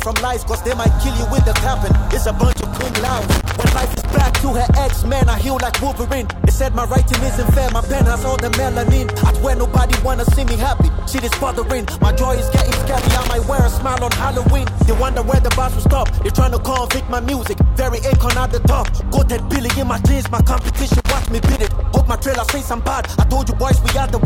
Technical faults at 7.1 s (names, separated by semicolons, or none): none